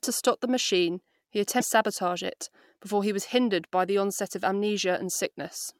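Damaged data in a compressed stream appears at 1.57 to 1.62 s, just before "sabotage it before he". For about 50 ms the decoder is fed corrupted bytes that it cannot read as a valid frame, so it loses sync and skips ahead to the next recognisable frame header. The result is a brief chirp, squawk, click or short hole cutting into the speech.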